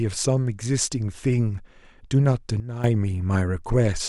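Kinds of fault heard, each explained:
Sudden gain jump: at 2.6 s the speech and its background noise drop together by about 12 dB in a single step, recovering at 2.84 s, likely from a gain change applied with no ramp; unlike a fade or compressor action, there is no gradual slope.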